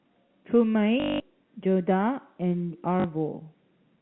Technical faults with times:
1.00-1.20 packet loss with last packet repeated
3.00-3.04 packet loss with last packet repeated

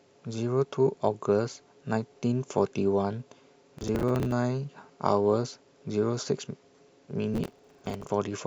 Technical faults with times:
3.78-4.32 processor overload crackle
7.34-8.10 processor overload crackle

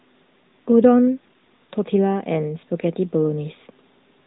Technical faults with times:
0.00-4.26 AMR narrowband mobile codec

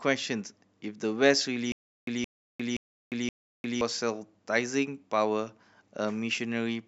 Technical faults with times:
1.72-3.81 stutter with silent gaps

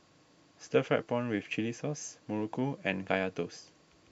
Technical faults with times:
none

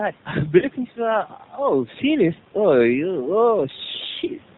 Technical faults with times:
0.00-4.58 G.729 codec
0.58-0.67 VoIP packet loss concealed by the speech codec

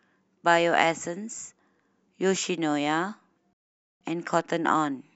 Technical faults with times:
3.53-4.01 rebuffering stall

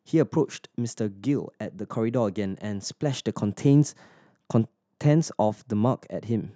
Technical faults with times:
none

